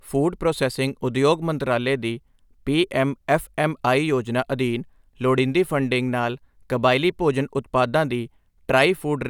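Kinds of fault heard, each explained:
No technical fault can be heard anywhere in this speech recording. There is nothing to list or explain for it.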